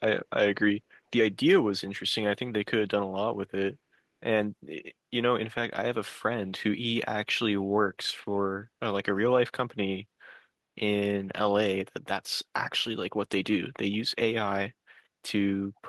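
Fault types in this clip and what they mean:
Echo leak: right at the tail end, around 15.76 to 15.8 s, there's a tiny scrap of sound, only about 40 ms long and very faint, about 40 dB below the speech. It trails the talker by about 396 ms, so it's likely an echo leak: the other end's loudspeaker got picked up by its own mic, and the echo canceller let that sliver slip back down the call.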